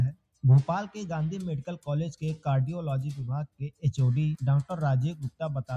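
Across the whole clip a noise suppressor built for speech is applied to music or sounds. It mistakes sustained and ambient parts of the audio for background noise and keeps pulling them down, so the level swings by roughly 10 dB as it clamps and releases. Attacks get through while held tones and tails sag, which gives a fluttering, thinned texture. Unlike compressor pumping, the dips follow how steady the sound is, not how loud it is.

The sound is cut by the noise suppressor three times. From 0.12 to 0.44 s and again from 3.47 to 3.84 s the level falls by about 21 dB, and from 5.14 to 5.41 s by about 20 dB. Each time a steady or decaying stretch is judged to be noise and sinks sharply before recovering. The sound fades away and returns rather than cutting to silence with a click, which separates these dips from dropouts or gating.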